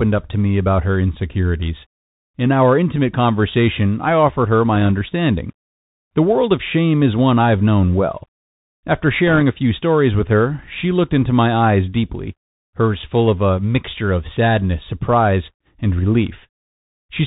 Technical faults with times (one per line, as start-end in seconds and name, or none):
0.00-17.26 Bluetooth CVSD headset codec
4.75-4.91 bit errors on a Bluetooth voice link
9.27-9.42 bit errors on a Bluetooth voice link